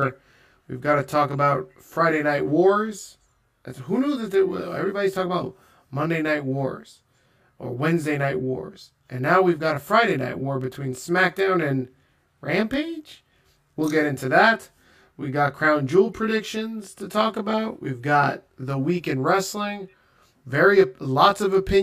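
Speech with channel delay (comb filtering) throughout: one channel runs roughly 20 ms behind the other, and summing the two to mono cancels shared content at evenly spaced frequencies, starting around 20 Hz, so the speech sounds rough or slightly doubled.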